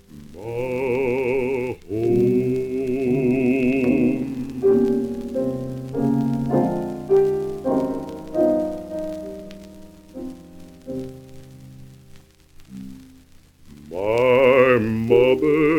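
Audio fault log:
Nothing to log here, since no faults turned up anywhere in the audio.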